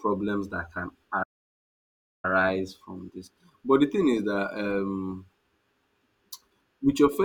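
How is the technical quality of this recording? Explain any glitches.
The recording has one clear glitch, a playback stall in the speech at 1.23 s. Right after "that can", the audio cuts to silence for about 1.0 s, then resumes at 2.25 s with "from this". The speech stops abruptly mid-flow rather than fading. The likely cause is the player running short of buffered data, or its playback thread being held up, so the output went silent until it could continue.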